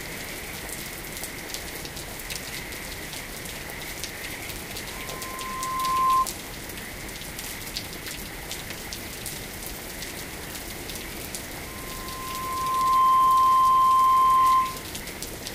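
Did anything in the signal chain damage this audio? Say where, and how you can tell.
Yes. Loudspeaker feedback squeal from the analogue acoustic path: a 1 kHz tone swells from 4.92 to 6.27 s, building over about a second, and again from 11.66 to 14.90 s, building over roughly a second and a half. It reaches about 15 dB above the sound. The microphone is hearing its own loudspeaker, and loop gain above unity at that frequency lets the tone feed itself.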